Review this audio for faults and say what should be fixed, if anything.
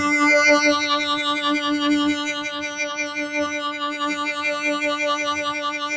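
A speech noise suppressor left active on this music makes sustained tones and tails sink while attacks pass, pumping by about 5 dB. The waveform envelope breathes and the spectrogram flickers.

The noise suppressor also cuts sound at 2.18 to 2.78 s (about 5 dB deep) and 3.02 to 3.34 s (about 6 dB). These show as dimmed tails between intact onsets.

The call path's band limit, with nothing above 8 kHz, is visible as a flat ceiling on the spectrogram. To prevent the pumping and cuts, disable noise suppression or switch to a music mode when sending music through the call.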